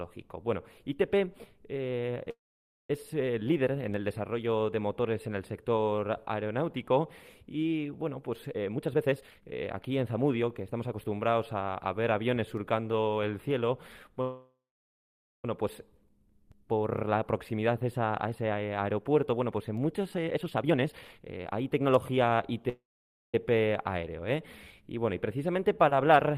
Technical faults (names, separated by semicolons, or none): call audio freeze; jitter buffer speed-up